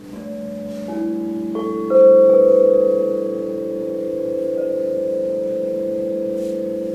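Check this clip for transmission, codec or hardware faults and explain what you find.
One fault runs through the whole recording. Channel delay (doubling), throughout: one channel arrives 40 ms behind the other, and when both are summed to mono the late copy stands apart at equal level, so every sound is doubled, heard as a short slap echo trailing the original.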